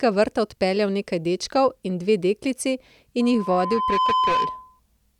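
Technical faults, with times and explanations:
3.2 to 4.8 s, loudspeaker feedback squeal: Just after "dečkov in dve deklici", a steady 1 kHz tone appears and swells over roughly 0.7 s until it is about as loud as the speech. It then holds until it stops at 4.8 s. A microphone is picking up the loudspeaker it feeds. At 1 kHz the loop gain rises above one, so that frequency keeps reinforcing itself around the loop and grows into a piercing whistle.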